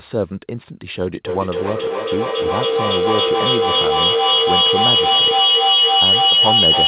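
From 1.25 s to the end of the clip, a feedback howl builds as a microphone picks up a loudspeaker on the same call in the same room. Each pass round the loop gains level, so the repeats swell rather than decay. They narrow to a tone near 3 kHz that pulses roughly every third of a second and peaks about 8 dB above the speech. That growth, instead of fading repeats, is what sets it apart from ordinary echo. The tone sits just under the call path's limit, where nothing above 4 kHz gets through, which fits telephone-band G.711 coding.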